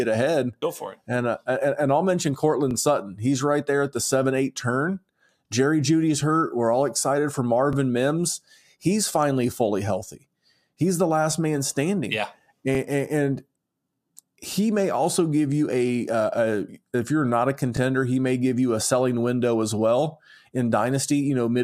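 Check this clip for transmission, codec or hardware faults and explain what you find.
There's one fault here, overlapping chunks, and it shows up four times: at 2.71 s after "uh and I'll mention", at 7.73 s after "all excited for", at 12.75 s, and at 17.77 s between "if you're not a" and "he may give you". The speech was handled in 5 s blocks, and each new block starts 20 ms before the previous one ends, so that sliver plays twice. You hear a click or stutter at each join.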